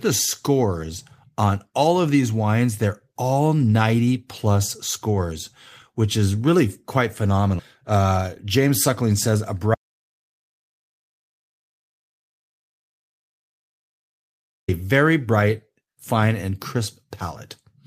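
From 7.83 to 9.61 s there's a jitter buffer speed-up: the receiver trims about a fifth of a second of pitch periods, so speech runs 112% fast at unchanged pitch. Then at 9.75 s an audio dropout to silence hits, with dead silence for 4.94 s until "very bright", likely from a lost input or link.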